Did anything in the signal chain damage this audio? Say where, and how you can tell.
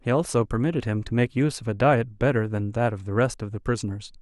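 No, nothing in the chain audibly damaged this speech recording; every stage from capture to playback leaves the signal intact, with no point where the sound is broken, altered or interrupted.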